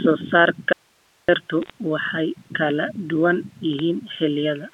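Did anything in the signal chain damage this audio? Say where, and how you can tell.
Yes. From 0.73 to 1.29 s there's an audio dropout to a faint residue: the speech cuts abruptly to hiss about 40 dB down, likely a link break.

Bit errors on a digital phone line show up at 1.62 to 1.70 s and 3.73 to 3.79 s as crackly ticks, each flipped bit corrupting one sample. The first burst is denser.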